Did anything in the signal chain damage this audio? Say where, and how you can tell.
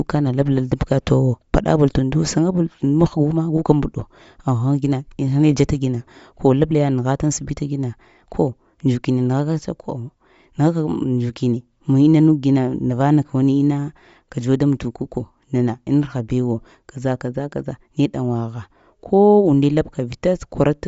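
Yes. Throughout the speech there is a breathy, grainy edge, with nothing above 7.7 kHz. This is likely Bluetooth LC3 compression at the codec stage: starved of bits, which fits around 32 kbps, it drops upper-spectrum detail and fills it with shaped noise.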